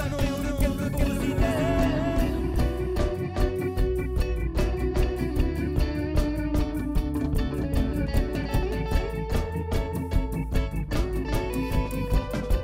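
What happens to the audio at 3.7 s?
At 3.7 s the sound is doubled. A second, full-band copy trails the original by roughly 0.4 s at about the same level, and this runs through the whole clip. That makes it a doubled audio track, not an echo: the copy has no decay or room colour, so each event simply repeats cleanly a beat later. The cause is likely a second capture of the same signal over a slower path, mixed in alongside the first.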